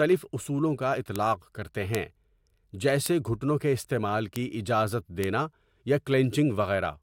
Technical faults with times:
1.16 bit error spike
1.95 bit error spike
3.06 bit error spike
4.36 bit error spike
5.24 bit error spike

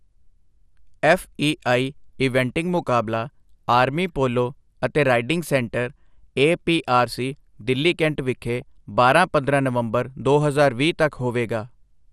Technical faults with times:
0.00-12.12 MP2 compression
2.76-2.91 DAB burbling
8.62 DAB burbling

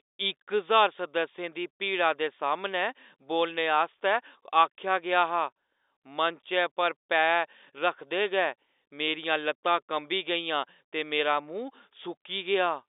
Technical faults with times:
none

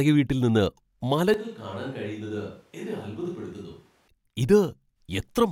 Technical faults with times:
1.34-4.08 switch to a distant microphone

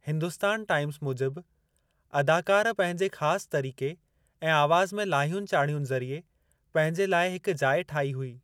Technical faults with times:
none

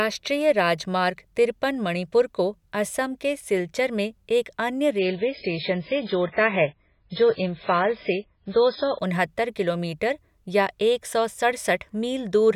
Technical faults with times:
4.99-8.99 adaptive stream at a lower bitrate

